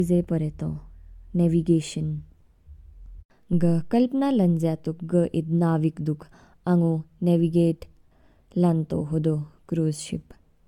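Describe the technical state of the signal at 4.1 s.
At 4.1 s the speech shows generation loss, present throughout the clip rather than confined to this moment. The sound is swirly and hollow, with smeared consonant attacks and no content above 17 kHz, a band limit that fits AAC-LC at around 96 kbit/s. The cause is likely about three successive lossy encodes, each requantising on a shifted frame grid so that noise and spectral gaps accumulate beyond what a single pass would leave.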